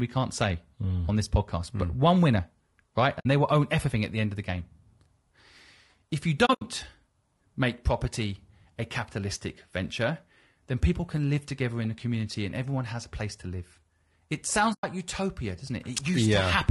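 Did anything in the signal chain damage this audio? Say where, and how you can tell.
Yes. The speech sounds rough and grainy throughout, with a noisy haze between the harmonics and a thin, synthetic top band. This is codec damage, likely low-delay AAC compression such as AAC-ELD running at a low bitrate near 32 kbps, whose short frames resolve harmonics poorly.

There are soft-edged holes at 3.19–3.26 s, 6.45–6.62 s and 14.73–14.84 s. The middle one is broken up, with gaps scattered over 160 ms and a longest run of around 70 ms. This is AAC frame loss with muting: the decoder zeroed the missing frames, and overlapping windows faded the sound out and back in.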